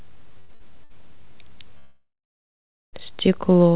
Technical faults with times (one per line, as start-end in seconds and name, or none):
0.40-0.92 short stall from a late packet
1.78-2.95 call audio freeze